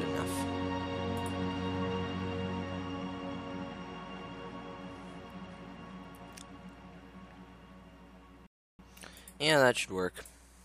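At 8.46 s a playback stall silences the sound for 0.32 s, likely a data shortfall. The waveform and spectrogram show a flat, empty gap.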